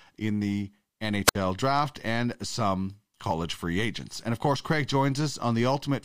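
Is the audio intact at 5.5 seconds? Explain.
Yes, at 5.5 s the speech runs intact, with no dropout, click, distortion or other fault at that moment.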